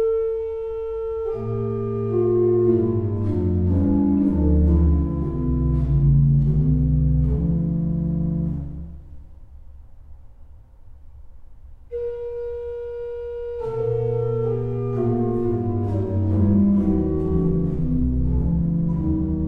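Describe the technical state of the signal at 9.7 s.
At 9.7 s the signal is intact, with no audible fault at that moment.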